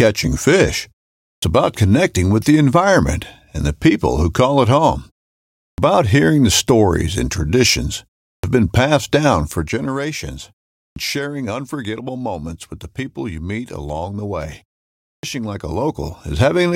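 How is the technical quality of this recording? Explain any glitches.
The recording has two distinct playback faults: syllables are cut off after pauses, and a level change near the end produces zipper noise.

Clipped start after a pause happens five times: at 1.34, 5.68, 8.34 (after "the stories and traditions"), 10.87 (just before "sharing unforgettable moments with") and 15.14 s (after "meet along the way"). Each time the output device has dozed off during a gap of about 0.3 to 0.65 s and needs roughly 85 to 100 ms to wake. The first sounds of the next phrase are lost, so it bursts out of silence. On a waveform the onset is a sharp vertical edge where a gradual attack should be. On a spectrogram the leading energy of the phrase is simply missing.

Zipper noise runs from 15.44 to 16.48 s while the level shifts by about 10 dB. Instead of gliding, the gain jumps in coarse steps, roughly 30 per second, and each jump leaves a tiny click. 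The result is a fine ticking or buzzing texture riding on the voice. On a spectrogram this appears as faint, evenly spaced vertical broadband lines. On a waveform the envelope looks like a staircase rather than a smooth ramp.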